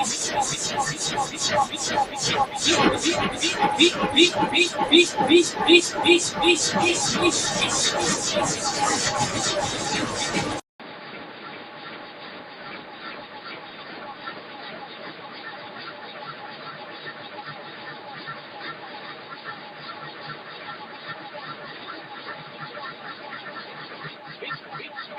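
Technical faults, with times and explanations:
Throughout, noise suppressor applied to music or sounds: a speech-tuned suppressor treats the steady parts and tails as noise, so they get pulled down by around 10 dB while attacks slip through. That's the pumping, thinning feel you hear.
10.60 s to the end, input switched to a poorer device: there's a 200 ms gap, then everything comes back duller and about 10 dB quieter, with new background noise roughly 45 dB down. That's likely a switch to a narrower-band mic.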